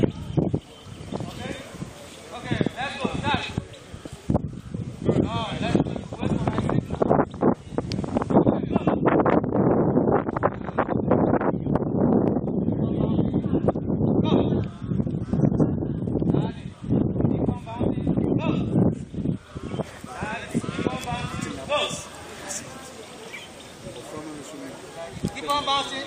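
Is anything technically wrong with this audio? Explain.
Yes. Frames out of order occur three times: 3.94 to 4.00 s, 8.42 to 8.52 s, and 19.16 to 19.25 s. Two adjacent runs of frames reached the decoder swapped and were decoded in that order, so each short stretch plays with its halves exchanged, in blocks of 23.2 ms the first time and 46.4 ms the other two. The result is a brief garbled flutter, and no time is lost.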